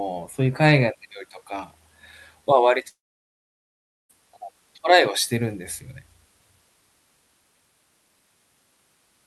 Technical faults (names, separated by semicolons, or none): long network dropout